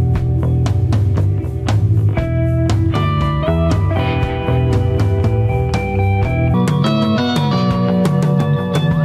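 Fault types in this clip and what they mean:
Section at the wrong speed: from 6.54 s to the end, the sound runs 1.48 times fast and sits about seven semitones higher, likely a clock mismatch.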